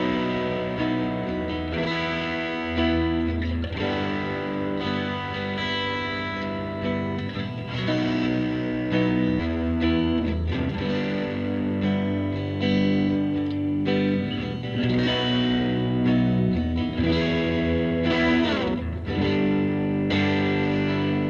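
At about 9.39 s there's a skip ahead: roughly a second of audio got dropped while later material was already queued, and playback jumps straight across with no fill at all. The two sides butt together almost directly, so the sound lurches forward abruptly.

Right after, from 9.49 to 10.21 s, comes a jitter buffer speed-up. The buffer was holding more than it wanted, so it trimmed short pitch-period slices repeatedly, about a tenth of a second in total. Playback runs at 115 % with unchanged pitch and sounds a bit hurried, all through the Opus call path's top end, which stops around 12 kHz.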